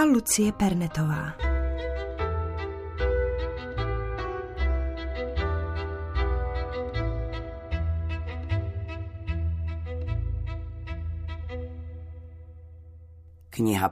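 At 12.24 s a handful of samples are likely dropped from the stream, so the waveform leaps straight to a later value. Only about a tenth of a millisecond goes missing, removing no sound but leaving one sharp click in the audio.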